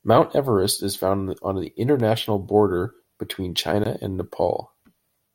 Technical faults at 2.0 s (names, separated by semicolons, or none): block of digital silence